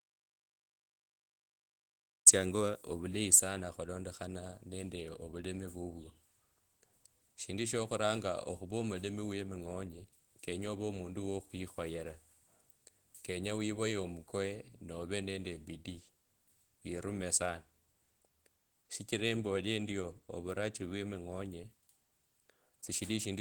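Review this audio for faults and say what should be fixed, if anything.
An audio dropout to silence runs from the very start of the clip to 2.27 s. The input signal was most likely lost through a disconnected device, a failed link or an accidental mute, while the recorder kept writing silence. The result is dead silence with no room tone at all, and the speech only cuts in mid-flow at 2.27 s, so whatever came before it is missing. The Opus voice compression, running fullband at 20 kbps, leaves only light traces and needs no fix. To prevent the gap, confirm a live, unmuted input signal before recording begins.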